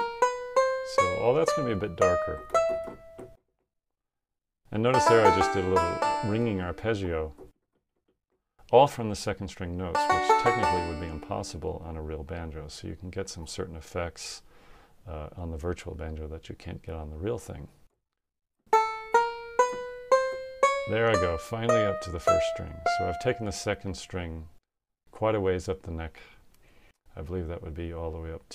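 Nothing in this audio stood out as a technical problem on listening.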